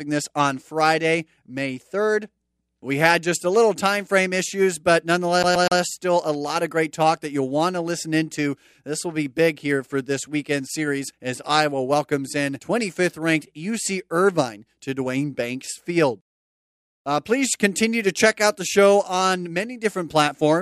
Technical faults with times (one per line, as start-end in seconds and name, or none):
5.43-5.80 CD stuck on one turn